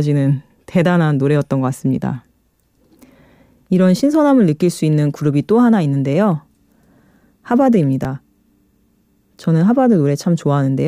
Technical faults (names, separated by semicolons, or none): dropped buffer (overrun)